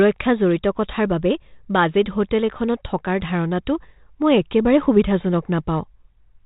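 Speech over 32 kbit/s G.726, with no faults heard.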